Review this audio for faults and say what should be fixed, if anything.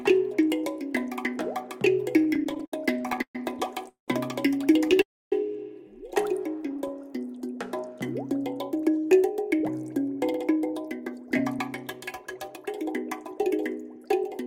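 From 2.19 to 3.36 s the sound stalls again and again. That is repeated stalling, a stutter. It comes as fifteen short gaps, the longest 127 ms. Together they fill about 323 ms, 28% of that stretch. Packets reached the receiver late or too slowly. The jitter buffer kept running dry, and the receiver stretched the last sound over each gap. Nothing is lost, but the sound drags. A milder stutter follows from 6.57 to 7.02 s. It has seven gaps of 13 ms or less, covering 21% of the span. Prevention: give the jitter buffer more headroom, or fix the uneven packet delivery upstream.

Two call audio freezes occur, at 3.89 to 4.09 s and at 5.02 to 5.33 s. In each, the sound holds and trails off, then goes dead. The first lasts 191 ms and is silent for about 140 ms. The second lasts 298 ms and is silent for about 260 ms. Afterwards the sound resumes exactly where it stopped. The likely cause is packets held up in transit, so the jitter buffer ran empty. 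The gap is inserted, and nothing is skipped. Prevention: find and fix the network path causing these bursts of delay.

From 8.71 s to the end at 14.43 s, a jitter buffer speed-up is heard. The sound runs at 107% of normal speed. Its pitch stays the same, so it feels hurried rather than higher. The buffer had built up too much delay. To work that off, the receiver cut many tiny pieces out, each one or a few pitch periods long. Roughly 0.4 s was removed in total. Prevention: keep the buffer from overfilling, so catch-up cuts are not needed.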